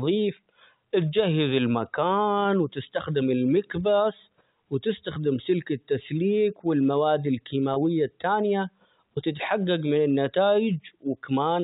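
At 7.74 to 7.76 s, between "وتستخدم سلك التسليك والمواد" and "التانية وتتحقق من", a 20 ms packet loss with pitch repetition, consistent with one lost packet, bridges the gap with a briefly held, buzzy repeated pitch period over the band-limited G.711 telephone sound.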